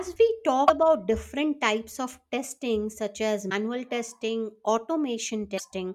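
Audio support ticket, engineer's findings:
Short glitches in the speech at 0.64–0.70 s, 3.46–3.52 s and 5.55–5.61 s, each about 55 ms. Damaged data in a compressed stream: corrupted bytes garble those frames, and the decoder loses sync and resynchronises at the next valid frame header.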